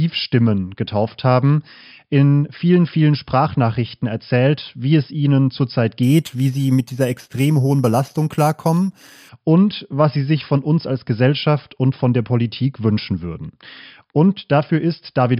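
From 6.03 to 9.29 s, between "wie es ihnen zurzeit" and "und was sie sich", imaging from sample-and-hold upsampling appears. The speech was raised from 11 kHz to 44.1 kHz by repeating samples without smoothing, which causes a bright metallic fizz about 24 dB down. On a spectrogram, a mirrored copy fills 5.5 to 11 kHz.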